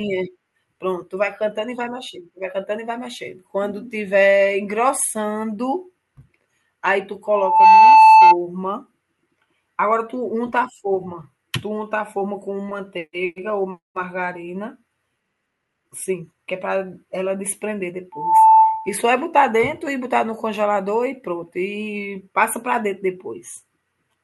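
Loudspeaker feedback squeal erupts from 7.32 to 8.37 s and again from 18.12 to 18.97 s. A single 882 Hz tone swells within about a third of a second to roughly 15 dB above the speech. The microphone is re-amplifying its own loudspeaker.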